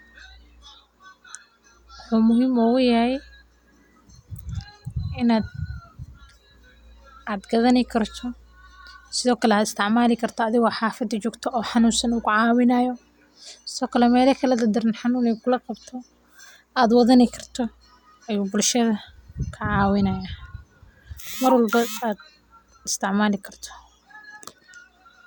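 No dropouts, distortion, noise bursts or timing errors can be heard anywhere in this speech recording, so there are no technical faults to place on its timeline.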